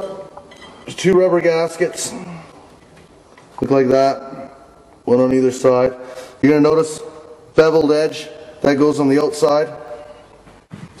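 Dropped samples at 6.80 and 9.88 s: each is a single sharp click, likely from a handful of samples going missing, so the waveform jumps abruptly to a later value.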